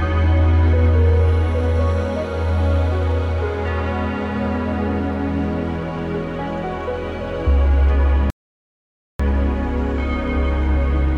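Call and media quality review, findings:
Playback stall, 8.30–9.20 s. Sound cuts out mid-flow for about 0.89 s of dead silence, then resumes. Likely cause: player-side starvation, either the buffer ran dry or the playback thread was blocked, so no samples reached the output until the pipeline recovered. Check buffer depth, thread scheduling and upstream delivery timing around the dropout.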